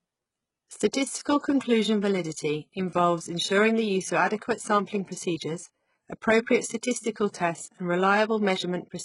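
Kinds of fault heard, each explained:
HE-AAC compression: The speech carries heavy codec damage, and the treble stops dead above 11.1 kHz, likely from HE-AAC at a very low bitrate around 12 kbps, where the upper band is copied up from lower bands, so harmonics misalign and s sounds come out gritty, metallic or lispy.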